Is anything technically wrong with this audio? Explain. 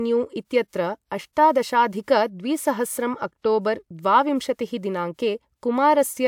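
No, nothing technically wrong turns up anywhere in this speech recording, so there's nothing here to flag.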